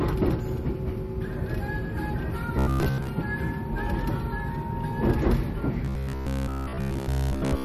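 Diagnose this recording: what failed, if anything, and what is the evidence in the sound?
MP3 compression runs through the whole clip, at the codec stage. The spectrum stops dead at 13.2 kHz, and the damage is plainly audible: a watery, swirling texture where weak frequency lines drop in and out between frames. That pattern, together with the hard treble cut, likely comes from an MP3 encoder starved of bits. The depth of the damage points to a low bitrate of around 48 kbps.

Robotic sound from repeated short buffers occurs from 2.59 to 3.09 s and again from 5.85 s to the end, at the driver or buffer stage. Both stretches take on a rigid, metallic buzz at 66.8 Hz. That pitch matches a fragment about 15 ms long played over and over, with most of the real audio in those spans skipped. The likely cause is new audio reaching the buffer too seldom, so the software filled the gaps with repeats.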